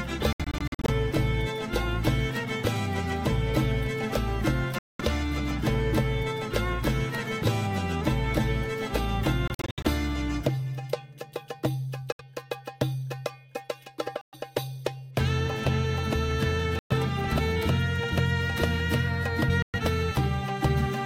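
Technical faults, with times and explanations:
0.33–0.90 s, 4.79–5.01 s, 9.48–9.86 s, 12.12–12.21 s, 14.21–14.35 s, 16.79–16.92 s, 19.62–19.75 s: Bluetooth dropout. The sound cuts abruptly to silence, then returns further along, as though it had kept playing. The first and third are clusters of short gaps, each up to about 70 ms. The likely cause is wireless packets arriving late and being discarded.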